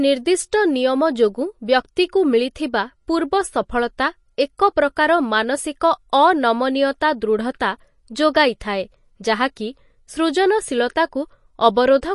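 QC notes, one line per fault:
Throughout, MP3 compression: the clip has no content above 11.3 kHz, and weak high components flicker between frames, giving a watery, swirling texture with metallic chirps on s sounds and softened consonant attacks. This is likely a bit-starved MP3 encode that fits a low bitrate around 48 kbps, where the encoder drops the top band and zeroes quiet frequency lines. A plain low-pass filter would only dull the top end; the flickering, swirling artefacts indicate lossy coding.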